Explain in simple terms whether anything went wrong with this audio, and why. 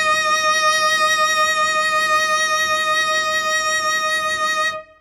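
Heavy compression damage runs through the whole music clip, most likely from WMA compression. The encoder stores the sound in fairly long chunks and throws away quiet detail to save space, so each sound carries a ringing smear and a washy hiss that swells and fades with the music. What sets it apart from a simple treble cut is that hiss and blur. Losing everything above about 17.7 kHz alone would only dull the top.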